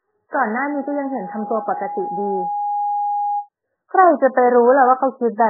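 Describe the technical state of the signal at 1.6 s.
At 1.6 s a steady tone near 822 Hz is swelling over the speech. It started at 0.47 s and grows for roughly two seconds, so here it is still rising toward a level about 5 dB below the speech, and it lasts until 3.49 s. This is a loudspeaker feedback squeal: the microphone is picking up the loudspeaker it feeds, and at 822 Hz the loop gain exceeds one, so that single frequency keeps reinforcing itself.

Underneath, the speech sounds dull, watery and swirly, with nothing above 2.1 kHz, so sibilants and consonant edges are blunted and smeared. The cause is likely heavy MP3 compression, consistent with a very low bitrate around 8 kbps. Starved of bits, the encoder cuts off the treble at a fixed frequency and drops weak frequency lines that flicker on and off from frame to frame, producing the swirling texture.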